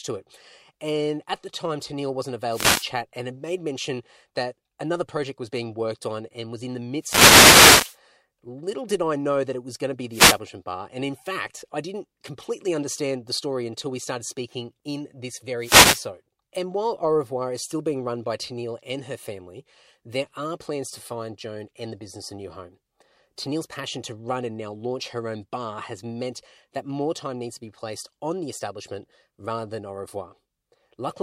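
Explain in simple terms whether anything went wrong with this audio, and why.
Four bursts of static break into the speech, each a wireless microphone noise hit: 2.49 to 2.90 s, just before "and had made mention"; 6.99 to 7.98 s, right after "and was in the"; 10.11 to 10.39 s; and 15.58 to 16.08 s, after "started speaking in this". The radio link from the microphone weakens briefly as reflected signals cancel each other. The receiver's own hiss then rises for up to about a second.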